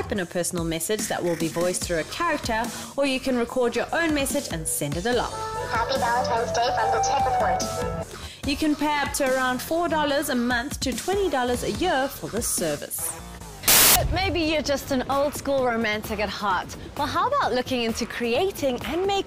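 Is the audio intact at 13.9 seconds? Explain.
No. From 13.68 to 13.96 s the audio turns into a burst of loud, harsh broadband noise, a fault of samples built from the wrong bytes: each sample's bytes were assembled misaligned or in swapped order, so the rapidly changing low bits became the dominant part of every value.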